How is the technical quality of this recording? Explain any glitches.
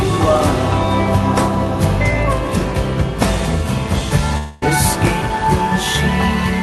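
The music has one glitch. From 4.37 to 4.64 s, the sound smears into a buzzy, fading continuation of itself for about a quarter of a second, then resumes further along with that stretch missing. This is likely a long network dropout: packets stopped arriving, so the receiver stretched out the last audio it had rather than going silent, and playback picked up later without the lost material. Across the clip, the top end stops around 12 kHz, which fits a call codec such as Opus.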